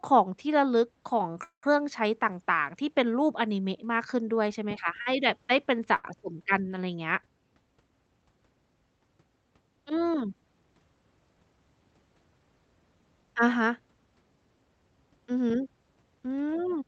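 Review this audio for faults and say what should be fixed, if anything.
Three brief hitches stand out, where a sound is held a beat too long with a slight buzz or dip before the speech carries on with nothing lost: 1.32 to 1.36 s, 5.01 to 5.08 s, and 5.96 to 6.06 s, the last stretching about 81 ms. These are short stalls from a late packet. Each time a packet missed its slot, the jitter buffer ran dry, and the receiver extended the last sound until it arrived. A slightly deeper receive buffer would absorb these arrival delays.

From 1.44 to 1.65 s the speech stops. A short buzz or hiss continuing the last sound fades into about 120 ms of silence, and then the speech resumes from exactly where it left off. This is a call audio freeze, likely caused by packets being held up in transit long enough to empty the jitter buffer. That put roughly 190 ms of extra time into the audio. Preventing this means reducing network congestion or delay spikes on the path.

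Between 16.52 and 16.82 s the speech sounds hurried, running at about 111% speed with the pitch unchanged. This is a jitter buffer speed-up. After the earlier delays, the buffer held more audio than its target, so the receiver trimmed small pitch-period-sized pieces repeatedly, roughly 40 ms in total, to cut the latency back down. Steadier packet delivery would make this catch-up unnecessary. Throughout the clip the call codec's band limit is audible as a top end cut at 8 kHz.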